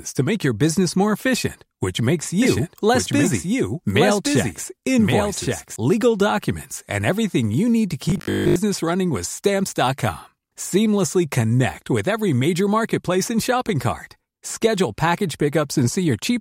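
Speech, with two faults. From 2.42 to 5.76 s there is a doubled audio track. A second full-band copy runs roughly a second behind, around 5 dB quieter, with no decay or room colour. It cuts in and out abruptly. A second, slower capture path is the likely cause. From 8.10 to 8.56 s comes robotic sound from repeated short buffers. The voice becomes a rigid, metallic buzz at 50 Hz that loosely tracks the speech. That pitch fits a 20 ms slice looping while most of the real audio is skipped. Audio arriving too seldom is likely behind it.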